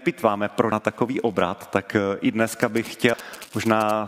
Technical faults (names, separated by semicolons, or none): damaged data in a compressed stream; GSM signalling bursts